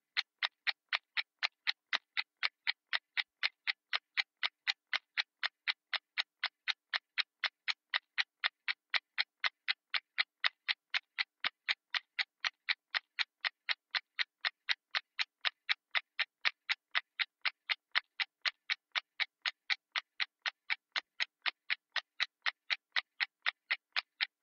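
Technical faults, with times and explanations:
Nothing stood out as a technical problem on listening to this recording.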